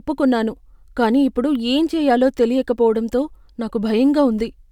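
Listening to the speech, nothing stood out as a technical fault at any point.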